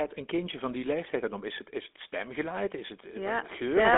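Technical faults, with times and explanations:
throughout, GSM full-rate codec: buzzy, gravelly speech with nothing above 3.8 kHz, because the voice is rebuilt from a vocal-tract model driven by sparse, regularly spaced pulses.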